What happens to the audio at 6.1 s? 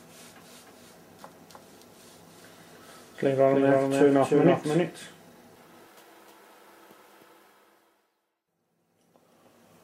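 At 6.1 s the doubled audio track is still present, as it is for the whole clip. A second full-band copy of the sound trails the original by roughly a third of a second. It sits about 5 dB below the original. This is likely a second capture through a slower path being mixed back in. The copy has no decay or room colour. It sounds like a flat, dry slapback stuck to every event.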